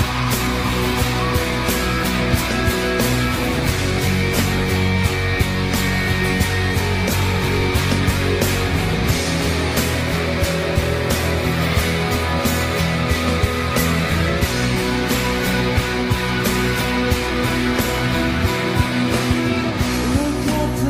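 No technical faults can be heard anywhere in the clip.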